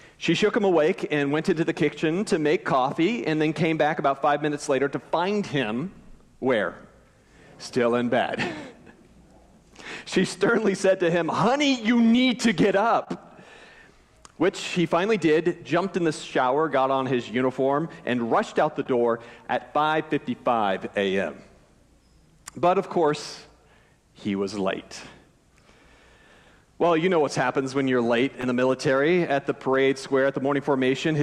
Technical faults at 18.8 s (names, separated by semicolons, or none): short concealed packet loss